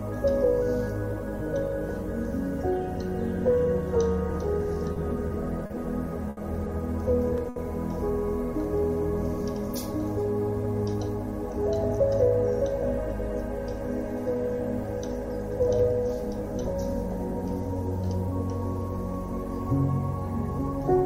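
Repeated stalls (stutter) run from 4.94 to 6.39 s. Packets arrived late, so the jitter buffer emptied four times and the receiver held the last sound through each gap, about 150 ms in all, the longest 70 ms. Nothing is lost, but the audio drags and hiccups.

A short stall from a late packet follows at 7.49 to 7.58 s. One packet missed its slot and the receiver stretched the preceding sound for 70 ms until it arrived, then resumed exactly where it left off, leaving one sound audibly held too long.

A jitter buffer speed-up spans 10.52 to 16.74 s. The buffer had built up surplus delay, so the receiver trimmed tiny pitch-period slices, roughly 70 ms in total. The sound plays at 101% speed with pitch unchanged.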